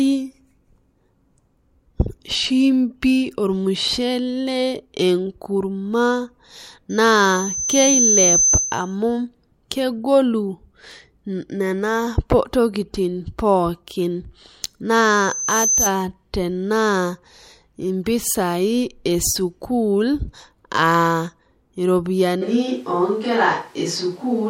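A microphone picking up the loudspeaker it feeds creates a loudspeaker feedback squeal in this speech recording, twice. The loop gain passes one at 6.2 kHz, so a thin whistle grows from 6.90 to 8.95 s, swelling over about a second, and again from 15.00 to 15.94 s, rising in under a second, each time ending a few decibels louder than the speech. At 22.43 s the close microphone's signal drops out and the recording continues to the end on what is likely a switch to a distant microphone. The level hardly changes, but the sound turns abruptly roomy and hollow, loses bass, and carries faint room noise well below the speech.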